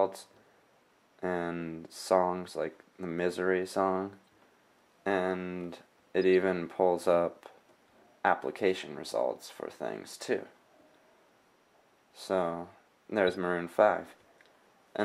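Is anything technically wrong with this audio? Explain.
Yes. There are three brief chirps: a faint blip at 4.27 s, a louder squeak at 6.23 s, and a harsher burst from 13.27 to 13.36 s, peaking at about -60, -40 and -25 dBFS. Each is a corrupt frame decoded: flipped bits in a few compressed frames were played anyway, so misread gains and codes put energy at the wrong frequencies for roughly a frame's length.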